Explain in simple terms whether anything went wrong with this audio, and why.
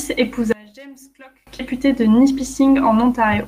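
From 0.52 to 1.47 s the speech almost disappears, dropping to a faint trace of itself before returning at normal strength. The likely cause is one channel inverted: one side of the stereo signal has its polarity flipped, so when the two sides are combined into one, the parts they share cancel each other out. A voice recorded in the centre is almost entirely shared, so very little of it survives.

At 1.6 s the speech jumps forward with no gap. This is a skip ahead. Roughly four tenths of a second of audio was thrown away, either lost in transit or dropped by the receiver's jitter buffer (the short holding queue that smooths out uneven network arrival) when it overfilled. The audio before and after the missing stretch is joined directly, so part of what was said is simply gone.

From 1.73 to 3.2 s the speech runs about 8% fast while keeping its normal pitch, so it sounds slightly hurried. 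This is a jitter buffer speed-up. The buffer was holding more audio than it needed, which adds delay. To catch up, the receiver removed many very short slices of the waveform, each one or a few voice cycles long, totalling around 150 ms across that stretch.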